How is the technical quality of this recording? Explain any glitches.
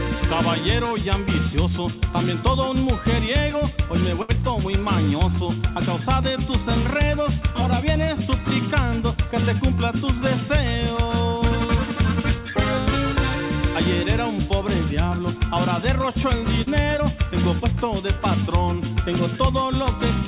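Two brief glitches show up, both from the call's packet delivery, and the whole thing is band-limited with nothing above 4 kHz, which fits a narrowband call codec like G.711 mu-law.

At 4.22 to 4.31 s there's a short stall from a late packet. The jitter buffer ran dry, so the receiver stretched the last sound for about 68 ms until the packet showed up, then carried on from the same spot. Nothing is lost, just a held sound with a slight buzz or dip, and everything after lands 68 ms later.

At 16.62 to 16.68 s there's a burst of packet loss. The receiver padded about 46 ms by extending and fading the last sound, then jumped ahead, so roughly 40 ms of audio is simply gone. You hear a brief held buzz or hiss and then a small skip.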